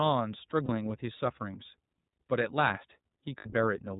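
The speech has passed through the iLBC codec throughout. Its narrowband coding discards everything above 4 kHz, and the lost detail, which fits 30 ms frames at around 13.3 kbps, is plainly audible as a dull, slightly rough and synthetic quality.

Lost iLBC frames occur twice, from 0.65 to 0.69 s and from 3.38 to 3.48 s, which fits one and then two missing 30 ms frames. The decoder fills each gap by repeating the last pitch cycle with added noise, heard as a briefly held, buzzy vowel before clean speech resumes almost immediately.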